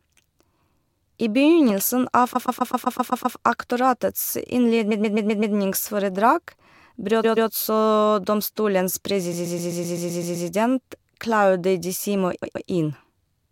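Repeated frames stutter the speech five times: 2.35 to 3.37 s, 4.91 to 5.55 s, 7.23 to 7.49 s, 9.32 to 10.47 s and 12.42 to 12.67 s. Each time, the same 128 ms block is played again and again, which fits a run of about six compressed frames being resent. On a spectrogram, each event shows identical 128 ms slices tiled side by side. The repeats lengthen the audio by 1.02 s, 0.64 s, 0.26 s, 1.15 s and 0.26 s.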